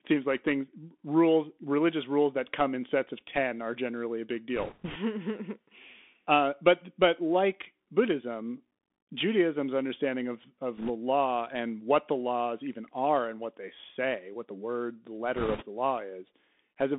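A speech recording carried throughout by the Bluetooth CVSD headset codec, with plainly audible damage. Nothing survives below about 200 Hz or above 3.5 kHz, so a spectrogram shows a flat ceiling at 3.5 kHz. The narrow band and the one-bit-per-sample delta coding point to a 64 kbps CVSD link. The adaptive step cannot keep pace with loud, fast-changing passages, so those edges distort, s sounds turn scratchy, and a fine granular hiss fills the band beneath the speech. Short bursts of bit errors on a Bluetooth voice link appear at 4.56–4.96 s, 10.77–10.91 s and 15.36–15.65 s, with error rates of roughly 3, 2 and 7 percent. Each flipped bit nudges the signal only slightly, and the decoder recovers quickly, so these passages sound like a rushing, crackly noise rather than loud clicks. The burst at 15.4 s is the harshest. On the waveform, each burst shows as a thickened, fuzzy envelope with no isolated spikes. 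On a spectrogram, it shows as a short haze of broadband noise spread across the 200 Hz–3.5 kHz band.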